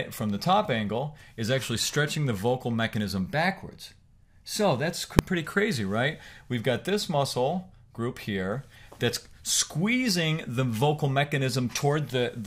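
At 5.19 s the audio is hit by a single sharp bang, the signature of invalid numbers at full scale: a calculation went infinite or undefined, and the output was clamped to its largest positive or negative value for a block lasting about 1.45 ms, which fits a 64-sample processing block. The block is so short that the pop at its start and the pop at its end merge into one click. On the waveform it shows as a brief flat slab sitting far from zero, beyond the audio's peaks, and on a spectrogram as a thin broadband vertical stripe running the full height of the frequency axis.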